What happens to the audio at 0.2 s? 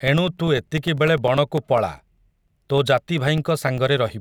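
At 0.2 s the speech is inside a run of periodic USB or driver dropouts that lasts from 0.08 s to 4.08 s. Every 0.1 s something stalls the USB bus or audio driver, and a sliver of audio, around 2 ms, is lost and replaced by silence. The result is a steady train of small ticks, ten per second and roughly forty in all, heard wherever the speech carries signal.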